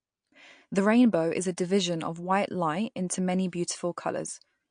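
Short speech clip with plainly audible MP3 compression throughout: nothing above 9.8 kHz and a watery, swirly texture, likely from a low bitrate around 48 kbps.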